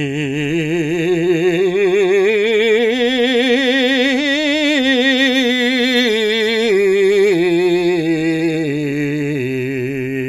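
No technical faults can be heard anywhere in the music, so there is nothing to place in time order.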